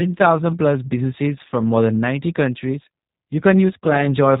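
From start to finish the speech carries G.729 codec damage, plainly audible. Everything above 4 kHz is gone, and each vowel sounds rebuilt rather than recorded: a slightly buzzy, synthetic roughness fits a coder sending only a vocal-tract filter, a pitch predictor and a few pulses per frame, consistent with G.729A at 8 kbit/s. A simple low-pass filter would dull the top end while keeping voicing smooth; here the voicing itself turns grainy.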